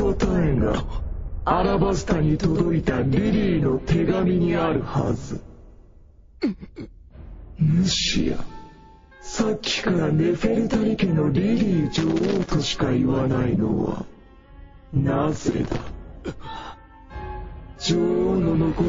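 Throughout the clip, the sound has a watery, swirling quality, with smeared attacks and metallic chirps on bright transients. This is likely MP3 compression, and the plainly audible damage fits a low bitrate of around 32 kbps, where weak frequency lines flicker between frames.

From 11.96 to 12.50 s and again from 15.32 to 15.90 s, irregular bursts of scratchy crackle break through. This is loose connector crackle: a worn or dirty contact making and breaking rapidly, chopping the signal.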